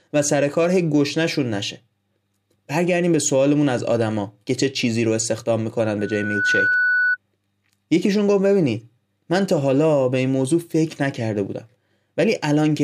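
From 5.98 s to 7.17 s a steady tone near 1.5 kHz swells over about half a second into a squeal as loud as the speech. This is loudspeaker feedback squeal: the microphone re-captured its own loudspeaker, and the loop gain exceeded one at that frequency.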